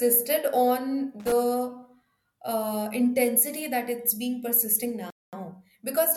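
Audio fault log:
1.20 to 1.32 s, loose connector crackle: a short, ragged burst of scratchy crackle, the sort a worn contact makes as it flickers between connected and open.
5.10 to 5.33 s, Bluetooth stall: the speech drops to silence for 225 ms and then resumes, likely the headphone buffer running dry while delayed packets caught up.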